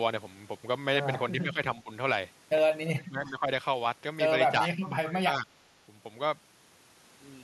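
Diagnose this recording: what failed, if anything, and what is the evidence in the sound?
Call processing failed. The speech dips at 1.34–1.59 s, 1.82–1.91 s, 2.91–3.5 s and 4.78–5.48 s, by about 10 to 25 dB, deepest near 3 s. This is likely speech suppressed in double talk. The echo canceller mistook this talker for far-end echo and attenuated it.

An echo leak also appears at 3.26–3.3 s. A faint copy of the voice returns about 358 ms late, roughly 30 dB below the speech. The echo canceller likely failed to remove all of the loudspeaker sound its microphone picked up.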